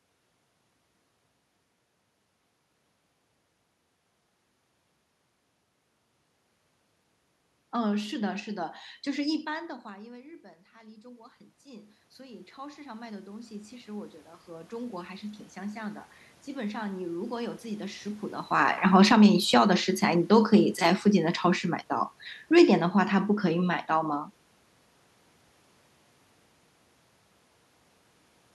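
From 10.73 s to 18.34 s the automatic gain rises. The level dropped by about 20 dB when the talker moved away around 9.5 s, so the control slowly added about 17 dB. Speech and room noise swell together, and the waveform envelope and the spectrogram's noise floor brighten steadily.

After the talker comes closer near 18 s, the automatic gain falls twice: from 18.51 s to 19.28 s and from 20.02 s to 22.9 s, each time by about 4 dB. The too-loud input sinks along with its background, and the waveform shows the envelope tapering while the spectrogram's noise floor dims.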